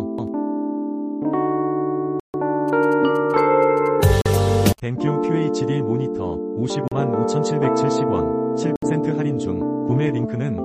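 Bluetooth stall at 2.20 to 2.35 s: the sound drops to silence for 143 ms and then resumes. The likely cause is radio interference delaying packets, so the headphones' buffer ran empty and playback waited for the resent data.

GSM signalling bursts from 2.68 to 4.80 s: a galloping dit-dit-dit of short buzzes at 217 Hz, sitting roughly 25 dB below the programme. A nearby 2G phone exchanging signalling with its network sends brief clusters of radio bursts, and the audio circuitry rectifies them into audible pulses.

Bluetooth stall at 4.21 to 4.26 s, falling inside the buzzing: a 43 ms gap of silence, likely another buffer underrun while delayed packets were resent.

Bluetooth stall at 6.88 to 6.93 s: a 38 ms dropout, with the sound picking up again afterwards, likely the same interference starving the headphones' buffer.

Bluetooth stall at 8.76 to 8.85 s: a 65 ms silence before playback resumes, likely caused by held-up packets emptying the buffer once more.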